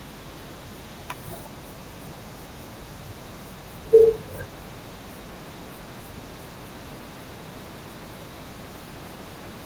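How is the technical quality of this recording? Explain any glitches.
The recording has one steady fault, a mains hum running under the speech from start to finish, over a light Opus voice compression layer that keeps the full audio band.

Mains hum, throughout: a ground loop or a nearby transformer is feeding the power line into the signal path, leaving a constant low tone at 50 Hz with some low harmonics. It sits roughly 20 dB below the speech, as a continuous drone.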